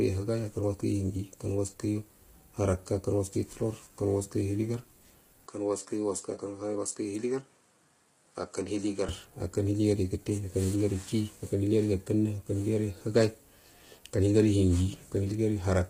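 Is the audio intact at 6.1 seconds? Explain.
No. At 6.1 s the sound is dull and boxy: from 5.47 s to 9.09 s the input has likely switched to a poorer device. Its narrower band stops near 10.5 kHz, the level falls by about 5 dB, and a faint new noise floor sits well beneath the signal. The change arrives without any gap.

Low-delay AAC compression is also present throughout. Its short frames resolve pitch harmonics poorly, so the speech sounds rough and grainy with noise between the harmonics, and nothing is above 15.6 kHz. The heavy damage points to a low bitrate, around 24 kbps.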